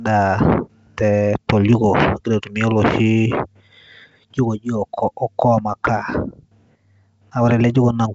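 No technical faults can be heard in this speech.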